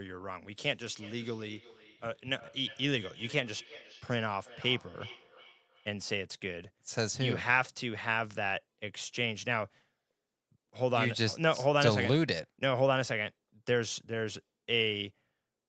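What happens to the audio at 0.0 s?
Nothing goes wrong at 0.0 s: the speech begins intact, with only the ordinary narrowing of a call path that leaves nothing above 8 kHz.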